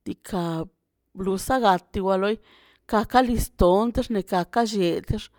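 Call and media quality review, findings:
No audible faults found in the speech on review; nothing to raise against any component.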